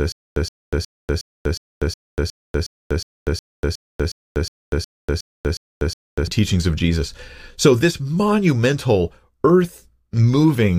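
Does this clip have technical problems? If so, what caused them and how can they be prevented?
Yes. From the very start until 6.27 s, a stutter with silent gaps: one 120 ms burst of speech repeats 17 times, each followed by about 243 ms of dead silence, every 363 ms. The likely cause is a stalled stream replaying its last fragment at each retry. Larger playback buffering and a steadier network connection would prevent it.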